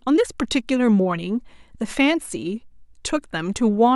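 Speech recording with no technical faults to report.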